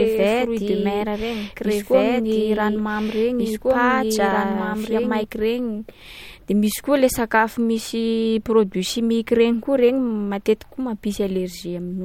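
From the very start until about 5.24 s, the speech is heard twice. A second, equally loud copy trails the original by about two seconds, so each phrase lands on top of whatever follows it. The repeat carries no decay or room colour, and it cuts off abruptly at 5.24 s. This is a doubled audio track, likely caused by the same signal being captured again through a slower path and mixed back in.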